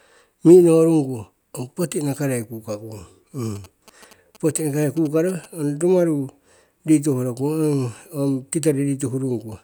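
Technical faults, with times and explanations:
3.56–5.46 s: GSM signalling bursts, galloping ticks and short 217 Hz buzzes well below the speech, as the audio circuit rectifies a nearby 2G phone's radio bursts.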